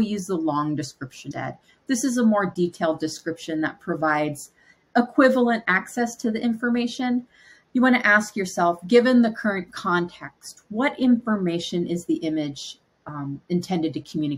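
Right near the start, from 1.30 to 1.32 s, there's a quick glitch, only about 20 ms long. That's damaged data in a compressed stream. Bytes in that stretch of the file got lost or scrambled. The decoder chewed on frames that didn't make sense, lost its place, and had to hunt for the next valid frame header before it could pick up cleanly. That brief misread is the glitch you hear.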